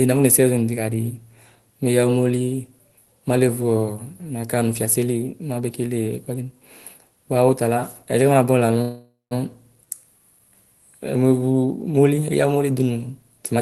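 From 8.81 to 9.33 s the speech stalls: the last sound is stretched into a buzzy tail that fades, followed by about 160 ms of silence, and then the speech resumes exactly where it left off. This is a call audio freeze, likely caused by packets arriving late and leaving the jitter buffer empty. Unlike a packet-loss dropout, nothing is cut out. About half a second is inserted, which pushes everything after it later.

Right after "umoli eya umoli dunu", from 13.54 to 13.61 s, a jitter buffer speed-up compresses the last fragment to about 175% of its normal rate. The receiver removes short pitch-period slices, roughly 50 ms in total, to shrink its backlog. This is what separates it from a sped-up recording or a pitch-shift fault: the pitch stays put, the Opus-coded speech just sounds hurried, and the audio stays band-limited near 12 kHz.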